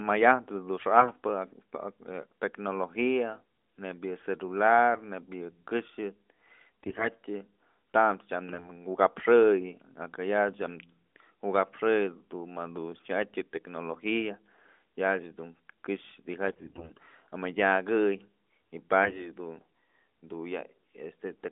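At 6.83 to 7.08 s, and again from 16.46 to 16.92 s just after "dun këxë", the speech turns hoarse and gargly while pitch and level hold. These are AMR bit errors: flipped low-priority bits misplace excitation pulses and skew fine gain and spectral values.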